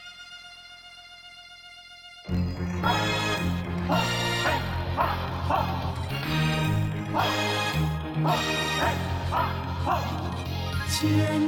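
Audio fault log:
0.00–7.38 s, filter restarted on every block: a regular buzz at about 43 Hz rides under the sound, its ticks growing louder and softer with the signal level. The filter clears its memory at each block boundary and starts from silence, so every block opens with a small transient. The tick rate fits a 1024-sample block at a 44.1 kHz rate. The buzz stops after 7.38 s.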